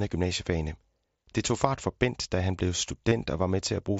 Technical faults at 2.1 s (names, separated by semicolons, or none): none